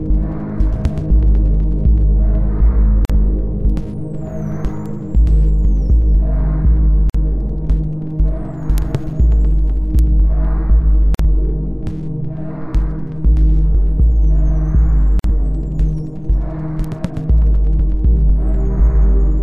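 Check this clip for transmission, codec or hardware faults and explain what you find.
Two faults recur through the clip.

Gaps at joins of encoded pieces at 3.05, 7.10, 11.15 and 15.19 s, every 4 s: separately encoded segments were spliced untrimmed, leaving 46 to 49 ms silences with smeared edges before the sound resumes.

Bit error spikes at 3.70, 4.86, 8.78, 9.99 and 16.84 s: a single flipped bit jumps one sample by a power of two, heard as a sharp, broadband tick.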